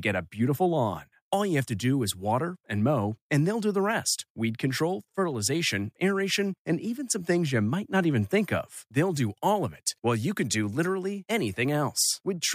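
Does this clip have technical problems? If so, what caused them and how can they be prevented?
No, no technical faults are audible.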